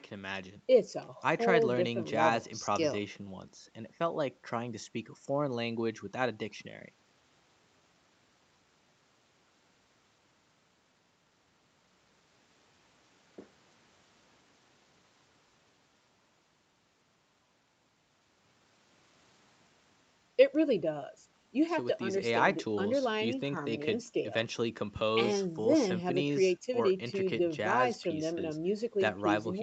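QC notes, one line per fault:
No faults found in this speech recording.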